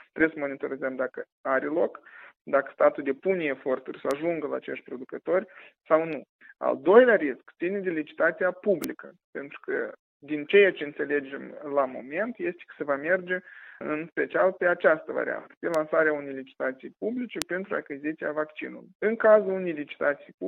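Bit error spikes at 4.11, 8.84, 15.74 and 17.42 s: single flipped bits briefly jump the audio by a power of two, peaking near about -14 or -2 dBFS, heard as sharp broadband ticks.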